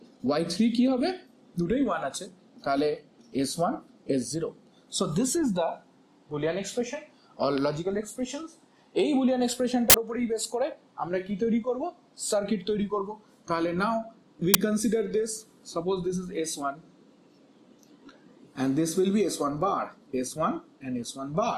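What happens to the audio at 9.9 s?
At 9.90 s there's an uninitialised buffer: for about 42 ms, up to 9.94 s, the playback grabbed a block before any real audio had been written into it, so whatever junk was sitting in memory went out as samples. You hear it as a short, harsh burst of digital noise that jumps out well above the surrounding level. That length fits a 2048-sample buffer going out unfilled.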